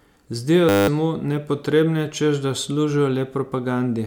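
At 0.69 s the speech locks up in a system hang loop that lasts until 0.88 s. The system stalled while the audio hardware kept replaying the same 10 ms slice of its ring buffer. That slice repeats about 19 times. At a loop rate of 100 Hz it fuses into a steady buzz, not a stutter. Roughly a fifth of a second of real speech is lost. Normal audio returns with "mu nepotrebne češ da".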